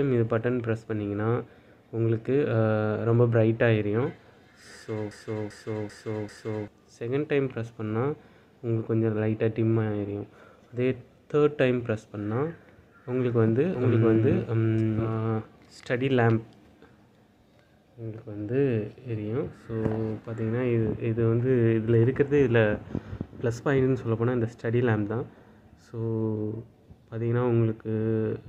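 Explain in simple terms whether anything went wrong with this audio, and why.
The playback or streaming chain most likely stalled from 5.11 to 6.68 s and kept resending the last scrap of audio it held. This broken-record loop repeats a 0.39 s piece four times in a row, and whatever should have played there is lost.

From 13.75 to 15.13 s, the same audio is likely being mixed in a second time through a slower path. This doubled audio track adds an equally loud copy trailing about seven tenths of a second behind, which starts and stops abruptly.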